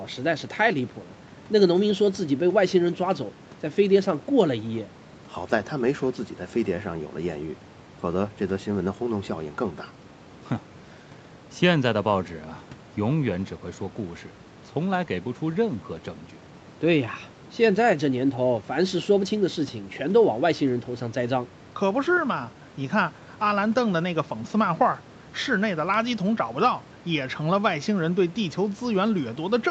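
No technical faults can be heard in this speech recording. Faint room noise sits about 25 dB below the speech, and the call path leaves nothing above 8 kHz, giving the band-limited top end of an ordinary call.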